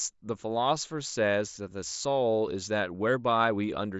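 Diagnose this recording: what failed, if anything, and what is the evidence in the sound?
Nothing failed; the speech comes through a Bluetooth mSBC headset link as expected, with the band ending near 7.7 kHz, and no stage in the chain shows a defect.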